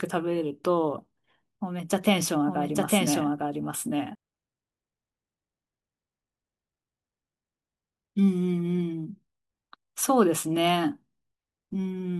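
A speech recording with a doubled audio track from 2.47 to 4.15 s: a second full-band copy runs about a second behind, roughly as loud as the original, with no decay or room colour, and it cuts in and out abruptly. Likely the same signal got captured twice through a slower path.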